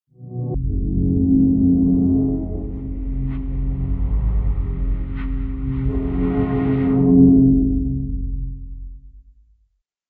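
From 0.0 to 0.54 s the opening sound has a wrong sample rate fault. The samples are played back far faster than they were captured, with no rate conversion. Speed and pitch therefore rise together, by about 2.76 times, or 17.6 semitones. This fits material recorded at 16 kHz being played at 44.1 kHz. The result is a shrill, sped-up, chipmunk-like rendering of the sound that lasts only about half a second.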